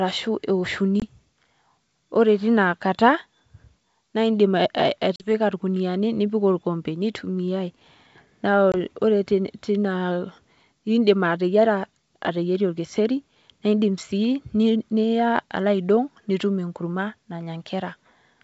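Speech over a G.722 wideband call shows packet loss on an ADPCM call. Silent gaps open at 1.00–1.03 s, 5.16–5.32 s and 8.72–8.77 s. About 20, 40 and 20 ms of audio are lost, which fits one or two packets each. After each gap the decoder's predictor and step size are out of step with the sender's. The sound returns slightly distorted, then settles.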